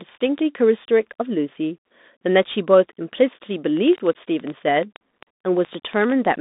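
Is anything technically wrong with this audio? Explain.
Yes. Throughout, the speech carries Bluetooth CVSD headset codec damage: a 0.2–3.7 kHz line band, a blank spectrogram above 3.8 kHz, scratchy sibilants and granular hiss from the one-bit delta coding.

From 3.77 to 6.26 s, a train of clicks, likely interference, ticks irregularly about 8.5 times per second, roughly twenty clicks peaking about 5 dB above the speech. They appear as sharp waveform spikes and thin vertical spectrogram lines.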